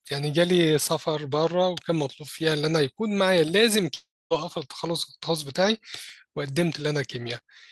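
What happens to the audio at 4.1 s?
At 4.1 s the speech drops out between 3.95 and 4.32 s. The last sound before the gap carries on as a buzzy hiss that fades away, leaving about 240 ms of silence before speech resumes. Roughly 360 ms of the original audio is simply absent, so speech picks up further along rather than where it stopped. This is a long network dropout, likely a stretch of packets that never arrived, with the receiver concealing the gap and then giving up.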